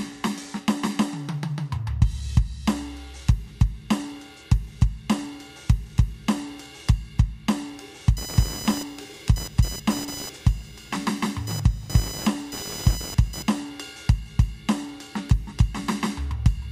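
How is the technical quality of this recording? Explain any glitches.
The recording carries one clear flaw: computer activity noise between 8.17 and 13.6 s. During that stretch, changing load on the computer's processor, graphics hardware or mouse pulls current through the ground shared with the audio circuit, so the ground reference itself wobbles. That lands in the music as a chattering buzz pulsing at around 1 kHz, sitting roughly 15 dB under the music. It follows the machine's activity, not anything in the music, then stops.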